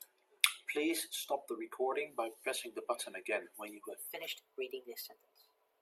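From 4.07 s to the end at 5.82 s, there's a section at the wrong speed: the speech suddenly runs about 1.16 times too fast, so it sounds hurried and roughly three semitones higher. Speed and pitch jump together, likely from that stretch being played back against the wrong clock.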